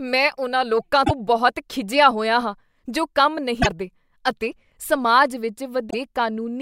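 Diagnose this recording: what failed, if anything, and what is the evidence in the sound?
Damaged data in the compressed stream, at the codec stage: short glitches at 1.02–1.11 s (between "ਮੈਂ ਉਨ੍ਹਾਂ ਲੋਕਾਂ" and "ਬਹੁਤ ਖਿਝਿਆ ਹੋਇਆ ਹਾਂ"), 3.59–3.67 s (after "ਹੋਇਆ ਹਾਂ ਜੋ ਕੰਮ") and 5.87–5.95 s. The decoder misreads corrupt frames, then resyncs on the next header. Spectrograms show brief breaks in the harmonics.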